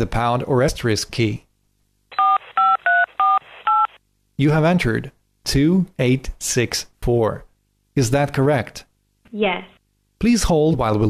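A display buzz runs under the whole clip: a 50 Hz video field-rate buzz with hash above it and a faint 15.6 kHz line tone, around 45 dB below the sound. The line tone and hash set it apart from plain mains hum, which is a smooth harmonic drone. Compressed frames are skipped at 0.68 s, 6.78 s and 10.73–10.75 s. The audio jumps ahead about 50 ms, 20 ms and 50 ms, which fits one or two 23.2 ms frames. The overlapping frames leave a short smeared blip with no silent gap, not the hard click of a sample-level dropout.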